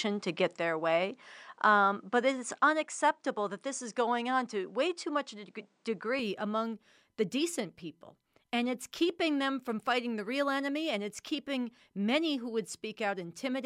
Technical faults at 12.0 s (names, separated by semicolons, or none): none